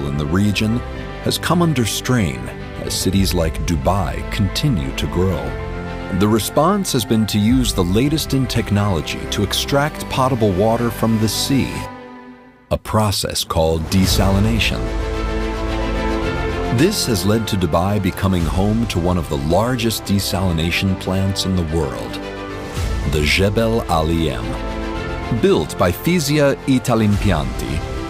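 No faults audible anywhere in the recording.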